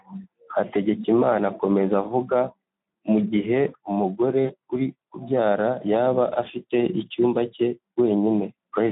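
Throughout, Speex codec damage makes the speech hoarse and noisy, with a band of 150 Hz to 3.7 kHz that fits a low, roughly 11 kbps setting. A spectrogram shows smeared harmonics and an empty region above 3.7 kHz. From 4.45 to 4.51 s, between "mu gihe umugore" and "uri kubyara yaba afite", VoIP packet loss concealed by the speech codec stretches the last sound into a fading buzzy tone or coloured noise, which fits about 40 ms of lost audio. The waveform shows a decaying stretch there.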